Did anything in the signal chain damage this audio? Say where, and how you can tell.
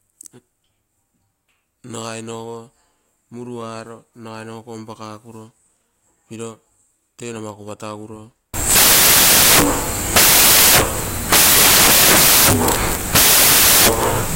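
Yes. At the sample-format conversion stage, from 8.54 s to the end at 14.35 s, the speech becomes loud, harsh broadband noise: samples built from the wrong bytes. The low-order bytes now carry each value's magnitude, so a spectrogram shows flat broadband energy and the waveform looks solid.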